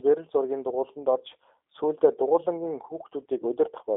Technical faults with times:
0.00-3.96 G.729 codec

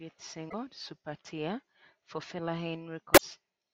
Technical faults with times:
0.67-1.23 drift correction step

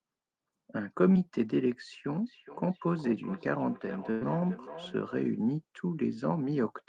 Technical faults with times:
1.13-1.17 short concealed packet loss
2.27-5.23 feedback echo between two devices
4.11-4.23 burst of packet loss

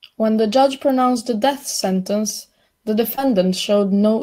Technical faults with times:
3.15-3.19 short concealed packet loss

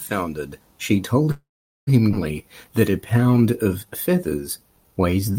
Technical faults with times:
1.31-1.89 call audio freeze
2.11-2.14 skip ahead
2.43-5.32 jitter buffer slow-down

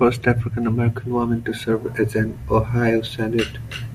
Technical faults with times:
none

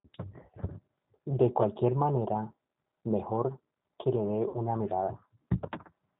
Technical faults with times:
0.00-6.20 G.729 codec
4.48-4.58 VoIP packet loss concealed by the speech codec

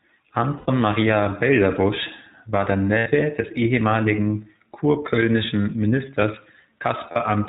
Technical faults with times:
0.00-7.49 iLBC codec
0.58-0.69 lost iLBC frames
2.98-3.08 lost iLBC frames
7.12-7.17 lost iLBC frames

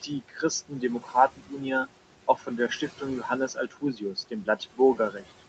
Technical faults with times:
0.00-5.49 noise suppressor artifacts
0.02-0.43 speech cut by the noise suppressor
1.00-1.62 speech cut by the noise suppressor
2.36-3.03 speech cut by the noise suppressor
3.48-5.41 speech cut by the noise suppressor

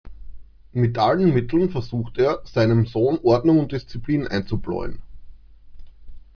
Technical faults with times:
none

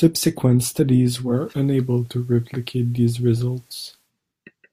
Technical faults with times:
1.19-4.12 digital radio blending to analogue

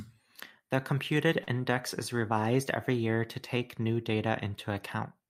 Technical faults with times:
1.43-1.49 short stall from a late packet

